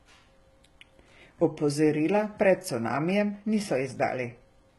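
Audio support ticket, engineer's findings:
Speech, full clip: sibilants gritty, metallic and lispy; treble extended but synthetic, with nothing above 11.8 kHz. Likely HE-AAC compression, heavy. Upper band regenerated by spectral band replication from copied lower bands, so harmonics misalign at the crossover. Consistent with a low-bitrate stream, around 16 kbps.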